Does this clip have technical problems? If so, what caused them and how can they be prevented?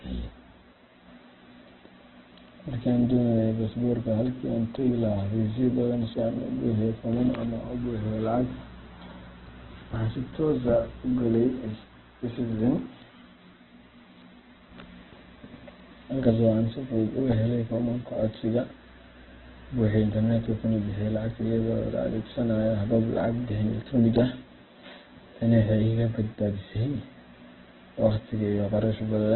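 Yes. Opus compression affects the whole clip: the speech has nothing above 4.1 kHz and sounds rough and grainy, which fits a very low bitrate near 8 kbps, where the encoder likely narrowed the bandwidth and filled starved bands with noise instead of detail. Encoding at a higher bitrate, around 24 kbps or more for speech, would keep the full bandwidth and avoid this damage.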